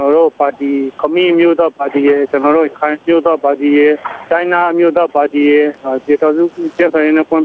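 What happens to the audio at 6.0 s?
At 6.0 s the gain pumping present across the whole clip is still audible. The gain swings by about 10 dB, squashing loud and soft parts closer in level, likely from excessive gain hitting a fast limiter. Unlike a noise gate, the background never drops out completely.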